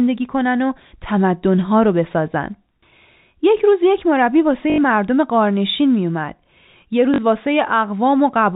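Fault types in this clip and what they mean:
Packet loss with last packet repeated: Audio went missing and the receiver filled the gap by replaying the last piece it had. This happens twice in the speech, for 80 ms from 4.70 s and for 40 ms from 7.14 s. The longer gap gives a brief robotic stutter with a buzz near 50 Hz, which fits 20 ms packets. The telephone band-limiting stays audible throughout.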